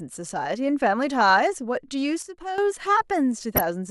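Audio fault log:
1.21–1.30 s and 3.53–3.61 s, DAB burbling: short noise blips and sub-band level jumps over the speech, consistent with a handful of MP2 frames corrupted by a bit error rate around 0.2%.
2.22–2.58 s, sudden gain jump: the speech and background drop together by about 10 dB, then snap back, likely a digital gain step applied with no ramp.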